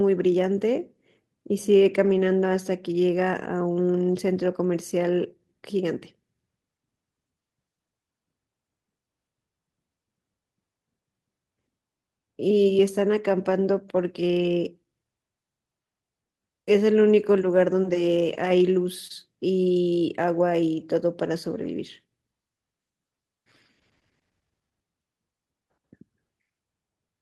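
Around 2.05 to 2.27 s there's a lost packet rebuilt from error correction. About 120 ms of the speech came from the low-bitrate backup copy the next packet carried, so there's no gap, just a rougher, noisier stretch. The same happens at 14.39 to 14.45 s, 17.87 s, and 21.46 to 21.60 s. At 19.07 to 19.12 s you get a short concealed packet loss. About 20 ms never arrived, so the decoder stretched the preceding sound to cover it and then blended back. It comes across as a brief smear. Its tail overlaps another error-correction rebuild at 19.10 s, which adds grit.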